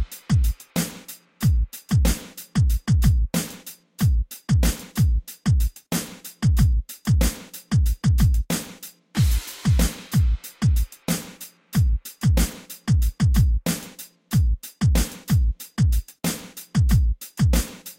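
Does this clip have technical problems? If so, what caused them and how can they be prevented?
No, this clip has no technical problems, so there is no cause to explain and nothing to prevent.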